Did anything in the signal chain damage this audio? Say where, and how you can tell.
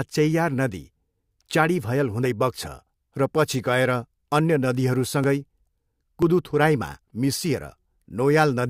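Yes. The speech has three tiny skips, each of a few milliseconds, at 2.25, 5.24 and 6.22 s, where the waveform jumps rather than fades. They fall at joins between the 1.0 s segments of the stream, which points to the stream delivery and playback stage and to an overlap between stream segments. Two 1.0 s segments carry overlapping time stamps, so the player trims the overlap from audio that was never duplicated, and that short slice of sound is lost.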